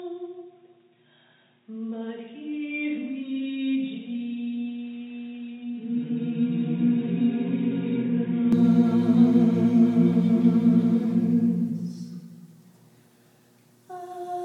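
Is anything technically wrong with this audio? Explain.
Yes. From 0.0 to 8.53 s the sound is dull and boxy. Nothing reaches above 3.8 kHz. It sits roughly 5 dB quieter over a faint new noise floor. At 8.53 s it clears abruptly, with no gap. The likely cause is an input switched to a poorer device.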